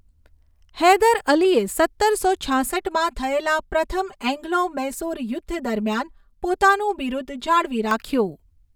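From 2.72 s to 7.91 s, just after "હૈદર અલીએ સત્તરસો", the speech takes on channel delay (comb filtering). One channel runs about 5 ms behind the other. When the two are summed to mono, the shared content cancels at evenly spaced frequencies. The first notch falls around 100 Hz, with more at regular steps above it. The voice turns hollow and phasey, with fixed notches.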